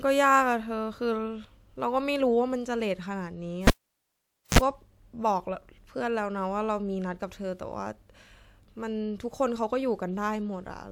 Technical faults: cable pulled and plugged in

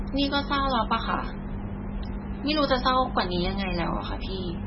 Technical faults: MP3 compression

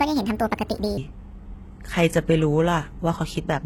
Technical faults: HE-AAC compression; section at the wrong speed

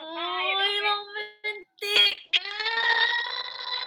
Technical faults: call audio freeze; short concealed packet loss; call bitrate drop

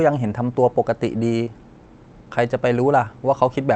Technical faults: short concealed packet loss

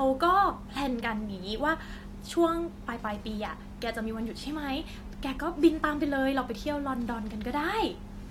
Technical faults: none

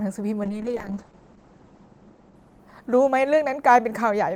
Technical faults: call bitrate drop

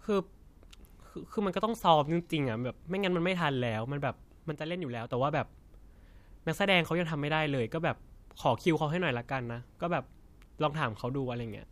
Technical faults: sudden gain jump

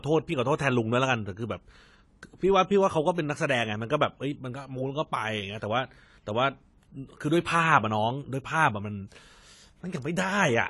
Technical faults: AAC compression

